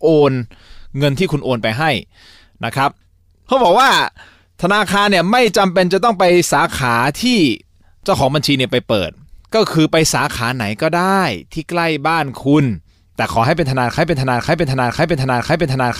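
A broken-record loop starts at 13.98 s: a half-second fragment of speech repeats four times to the end, likely a stalled player resending its last buffer.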